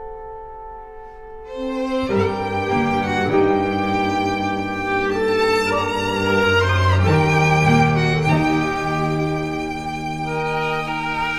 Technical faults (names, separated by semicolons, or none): none